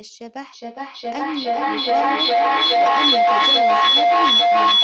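From 0.53 s to the end, feedback echo between two devices: one device replays what the other's microphone picks up, and that microphone picks it up again. Each sound returns roughly every 0.4 s, thinner and more ringing, and the repeats build to about 13 dB above the speech rather than dying away. That growth marks it as a loop, not a single repeat that fades.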